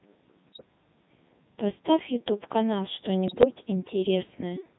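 Throughout, the speech carries the robotic, buzzy character of the Codec 2 vocoder, consistent with its 3.2 kbit/s mode. Only pitch, voicing, energy and a spectral envelope survive; the decoder rebuilds the voice from sine waves, so the original waveform is gone and the damage is heavy.

From 0.52 to 0.66 s, and again from 3.28 to 3.45 s, bit errors on digital voice radio corrupt several vocoder frames. The errors reach roughly a few percent of bits, somewhat more in the second burst. Because each bit steers a whole frame's pitch, level, voicing or spectrum, the synthetic voice lurches in pitch and loudness and breaks into warbling, bleepy gibberish.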